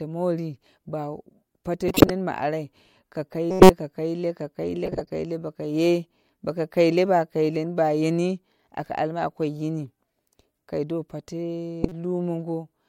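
Speech carrying four sharp chirp-and-noise bursts, at 1.88–2.10 s, 3.50–3.70 s just before "ka klaile ka kaile", 4.85–5.11 s before "kaile bokoye boko kaile", and 11.83–11.92 s. Each is a corrupt frame decoded: damaged compressed frames, around half a dozen per burst, were played anyway, putting energy at wrong frequencies.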